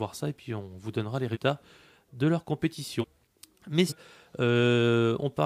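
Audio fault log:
1.33–1.37 s, 3.00–3.05 s, 3.88–3.93 s: compressed frames skipped. After "donnera les" and "de leur" the sound jumps ahead about 150, 300 and 300 ms. Whole 46 ms frames are lost. On a spectrogram this shows as an abrupt vertical seam.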